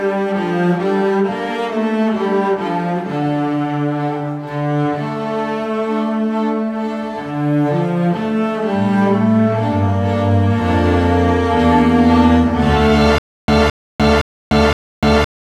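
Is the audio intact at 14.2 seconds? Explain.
No. From 13.18 s to the end, the audio shows a stutter with silent gaps: a 217 ms fragment repeats four times, every 515 ms, separated by about 298 ms of digital silence. This likely comes from a stalled player replaying its last buffer, so the intended audio is lost.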